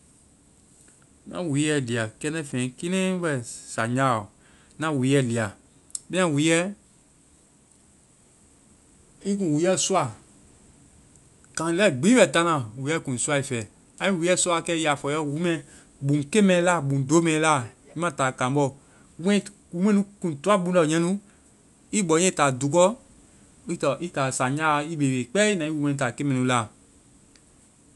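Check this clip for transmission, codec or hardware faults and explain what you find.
Nothing in the speech stood out as a fault on listening.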